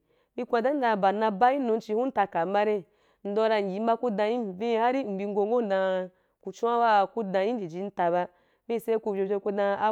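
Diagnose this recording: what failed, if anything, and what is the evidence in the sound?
Nothing in the chain seems to have failed here; the speech arrives with no audible breaks, glitches or damage at any stage.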